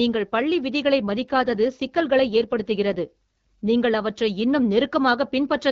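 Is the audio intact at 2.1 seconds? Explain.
No. At 2.1 s the clip is inside an AMR rate drop running from 1.08 to 3.69 s, after "பள்ளி விதிகளை" and ending before "நீங்கள் அவற்றை இன்னும்". The wideband codec falls from 12.65 to 8.85 kbit/s, so speech turns rougher and more synthetic. Unlike a fallback to narrowband or packet loss, the bandwidth stays full and nothing drops out.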